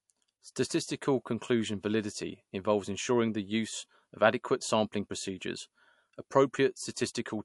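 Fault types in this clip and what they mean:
MP3 compression: the speech has nothing above 11.3 kHz and a plainly audible watery, swirly quality, with sibilants turning metallic. That's likely a lossy encoder running short of bits and dropping weak frequency detail, which fits a low bitrate around 55 kbps.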